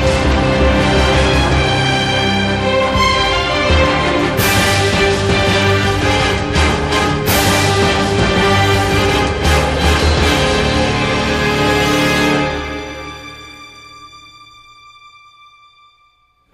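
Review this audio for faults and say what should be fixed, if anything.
Channel delay (comb filtering) runs from 0.0 to 8.65 s. One channel arrives roughly one sample late, and the mono sum cancels content near the very top of the band, about 20 kHz, dulling the air and sheen of the sound. Align the channels before summing to mono, or check the downmix with a polarity and correlation meter.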